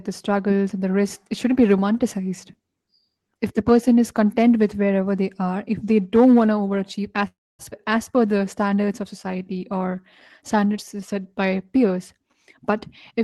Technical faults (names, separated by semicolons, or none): call audio freeze; skip ahead; jitter buffer slow-down; jitter buffer speed-up